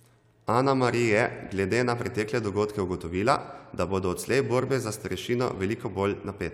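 Nothing in this recording reveals any technical fault.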